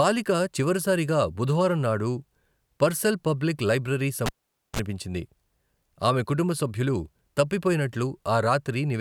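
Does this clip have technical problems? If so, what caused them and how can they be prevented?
Yes. At 4.26 s a pop cuts the speech to near silence for 0.48 s, then 33 ms of 50 Hz mains buzz and a second pop bring it back at 4.79 s. This is a live cable pulled and plugged in, buzzing while only the tip touched. Mute the channel before reseating cables.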